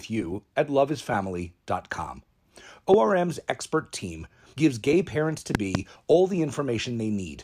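A loud pop lands at 2.94–2.96 s, just before "expert team gives gay", and a double pop follows at 5.55–5.77 s, between "gives gay parents to" and "all the", each around 20 dB above the speech. The likely cause is a voltage pulse from a plug, switch or static. The speech carries on unbroken underneath, which sets these apart from dropout clicks.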